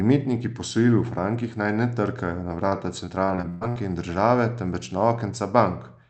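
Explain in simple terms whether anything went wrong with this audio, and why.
Yes, something went wrong. Between 2.69 and 3.78 s there's repeated packet loss, the robotic sound you get on calls. Seven chunks went missing, the longest about 0.12 s, and the system papered over each by stretching the last sound, so roughly a quarter of that stretch is filler and it comes out choppy with pieces missing.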